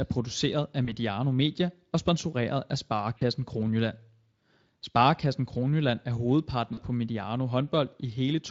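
Packets dropped out of the call three times, and the Speex decoder, running at light damage, covered each gap by extrapolating its last pitch and filter at falling gain. This is VoIP packet loss concealed by the speech codec. After "produceret af", 0.85–0.96 s, a 20 ms hole is bridged. After "og sponsoreret af", 3.17–3.23 s, and again at 6.73–6.80 s, 40 ms holes fit two lost frames. Each gap becomes a brief, fading smear of buzzy tone or coloured noise, and the speech stays weakened just after.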